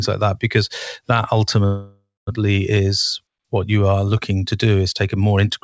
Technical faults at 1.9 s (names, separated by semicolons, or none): call audio freeze